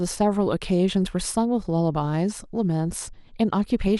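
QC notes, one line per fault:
Throughout, MP2 compression. The speech sounds dull and muffled, with a gurgling, granular roughness. Upper frequencies flicker in and out as whole bands drop away and return. What remains sounds coarse and grainy. The likely cause is MPEG Layer II coding starved of bits, which fits a rate near 80 kbps. The coder splits the sound into 32 sub-bands, switches off the upper ones and quantises the rest crudely.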